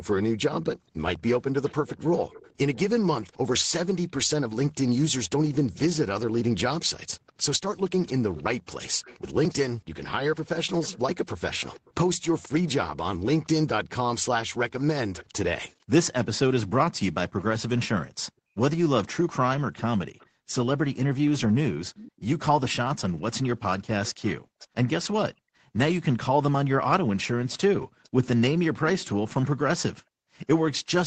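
From 1.64 s to the end, a faint, delayed second copy of the speech trails the talker by about 0.48 s, sitting roughly 20 dB below the main voice. This is an echo leak. The far end was most likely playing the call over a loudspeaker, and its echo canceller left part of what its microphone picked up, which was then sent back down the line.

Between 18.32 and 20.52 s, the room sound underneath the speech sinks abruptly and comes back, adding up to about half a second of dips that reach about 39 dB down. The same background gated by the echo canceller returns between 24.39 and 30.38 s, with around a second of drop-outs in total, the deepest about 40 dB. While the loudspeaker was active, the canceller clamped the microphone gain hard, then released it.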